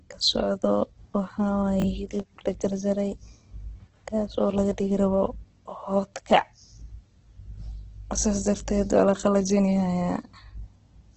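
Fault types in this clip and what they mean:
Opus compression: The speech sounds rough and grainy throughout, with a noisy texture where clean tone should be. Nothing is left above 8.2 kHz, so the top end is cut off. This is likely Opus in its music (CELT) mode, running short of bits. It keeps each band's energy but fills detail with folded or noisy content. The heavy damage points to a low bitrate, around 12 kbps.
Chunks out of order: Between 1.80 and 1.84 s, a short piece of speech plays in the wrong order. It sounds like a brief garbled jumble. The pattern fits a 20 ms chunk that arrived one chunk late, so it plays after the piece that should follow it. Nothing is missing. The swap creates three hard joins.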